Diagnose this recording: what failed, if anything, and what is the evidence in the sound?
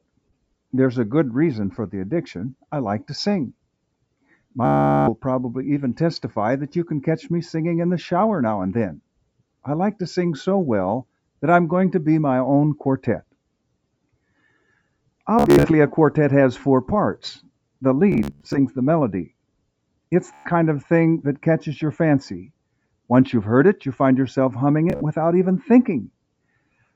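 A rapid buzzing repeat of one short slice, a machine-gun stutter, breaks in at 4.65 to 5.11 s, 15.39 to 15.71 s, 18.12 to 18.58 s, 20.33 to 20.52 s and 24.90 to 25.02 s. The sound then picks up further along, as if it had kept playing. This is Bluetooth stutter at the wireless link. Packets arrived late or not at all, and the receiver replayed its last buffer. About 420 ms went missing in the first gap. The 15 s, 18 s and 25 s events are scattered bursts rather than one solid run.

Near the end, from 26.09 to 26.92 s, parts of the sound sink sharply, by about 19 dB at the deepest, for roughly a fifth of a second in total. The steadier, decaying portions drop away while abrupt onsets survive. This is sound cut by the noise suppressor in the call processing stage. It misjudged that material as background noise and attenuated it harder than the surrounding audio.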